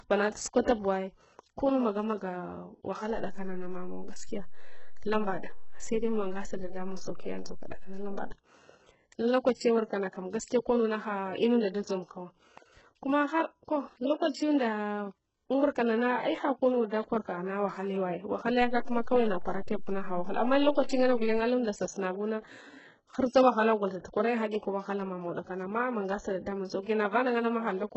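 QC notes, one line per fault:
Throughout, HE-AAC compression: the treble has a gritty, metallic, lispy quality on s sounds, with heavy codec damage that fits a very low bitrate around 8 kbps. The likely cause is spectral band replication, which rebuilds the upper band by copying lower bands upward under a coarse envelope, so the harmonics above the crossover do not line up.
0.30 to 0.35 s and 20.83 to 20.88 s, pre-echo: a short hiss of about 47 ms and 53 ms arrives before each attack, which sounds soft and smeared. The transform codec spread its block's quantisation noise, sized for the loud onset, into the quiet moment ahead of it.
3.16 to 8.32 s and 18.62 to 21.39 s, DC step: the waveform's zero line jumps to an offset, heard as a low thump or click at each step while the speech itself carries on unchanged. The second offset ends just before "alunds sasunabuna".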